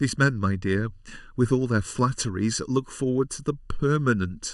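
Throughout the speech, the sound is hollow and phasey, with a fixed dull coloration that never moves as the talker's pitch changes. This is channel delay (comb filtering): one channel arrives less than a millisecond behind the other, and when the two are summed to mono, the shared content cancels at evenly spaced frequencies. The first notch falls near 700 Hz, with further gaps repeating up through the kHz range.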